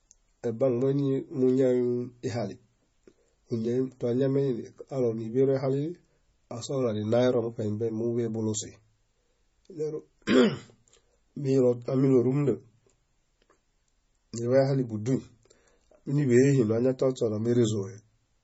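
From start to finish the speech sounds watery and swirly, with nothing above 7.6 kHz, so sibilants go dull and chirpy. That's likely heavy MP3 compression, which fits a very low bitrate around 24 kbps: the encoder lopped off the treble and kept dropping weak frequency detail.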